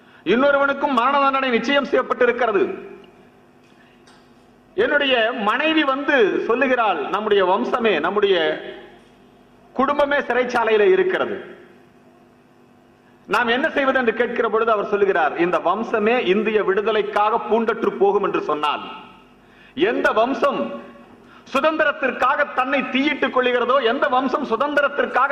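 At 6.28 s a brief smeared, noisy patch interrupts the sound for about 43 ms, which fits two lost frames. This is AAC frame loss with concealment. The decoder had no data for that stretch, so it rebuilt the gap from the last good spectrum. The result sounds blurred and phasey rather than silent. At 8.54 s a longer patch of about 64 ms follows, consistent with three lost frames.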